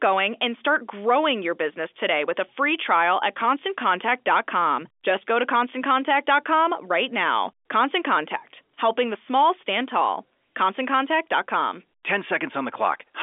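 No technical faults are audible in the speech. It arrives over G.711 A-law telephone coding, confined to the 300 Hz to 3.5 kHz line band with nothing above 3.7 kHz, and any damage from the coding is faint at most.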